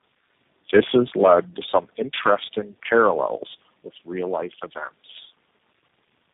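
From start to end, the speech carries tandem speech coding. It sounds rough, muffled and warbly, more so than a single coder would leave it. Nothing reaches above 3.8 kHz. The call seems to have been decoded and re-encoded at several borders, and each coder worked on the last one's damaged output. The harshness fits a chain of perhaps four speech codecs, with a low-rate coder such as G.729A among them.

At 1.8 s the level drops suddenly by about 4 dB. Voice and background fall together, in one step. At 3.84 s the same drop happens again, by about 4 dB. This is likely the microphone volume stepped down by the call software. It would have judged the input too loud and lowered the device's input volume at once, each time.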